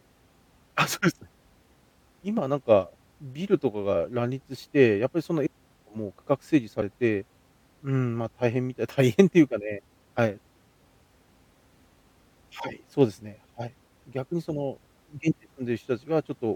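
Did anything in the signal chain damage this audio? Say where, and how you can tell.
Yes. Damaged data in the compressed stream causes brief glitches in the speech at 2.37, 6.81, 10.17 and 12.63 s, and from 15.30 to 15.33 s. Corrupted bytes make the decoder misread those frames and lose sync until it locks onto the next header.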